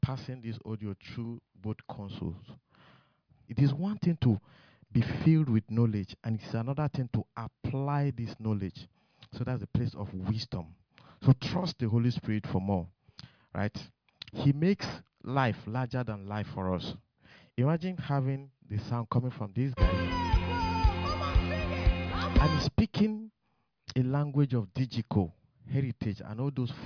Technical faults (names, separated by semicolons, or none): none